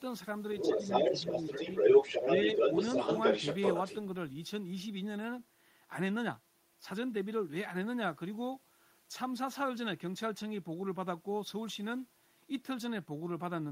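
Other side's voice leaking through, from 0.56 to 3.98 s: a second voice sits a few decibels above the main talker. The likely cause is a loudspeaker on the talker's device feeding the far end back into the microphone, with the echo canceller leaving it behind.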